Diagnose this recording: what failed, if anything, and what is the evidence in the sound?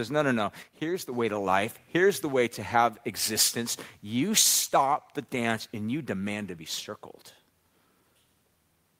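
One channel drops out from 0.63 to 1.12 s, after "no no" and before "way to life". The level falls abruptly by about 6 dB, then recovers. The likely cause is an intermittent analogue wiring connection, leaving the mono sum with only one channel's contribution.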